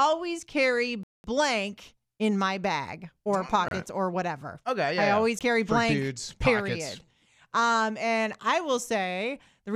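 At 1.03 s the speech drops to silence for about 207 ms, resuming at 1.24 s; shorter gaps follow at 3.68 to 3.71 s (27 ms) and at 5.39 s (17 ms). These are most likely Bluetooth stalls, where held-up packets let the headphone buffer empty and playback paused. Each gap sounds like an abrupt cut-out. On a waveform they show as flat silent stretches, and on a spectrogram as clean vertical blank bands across all frequencies.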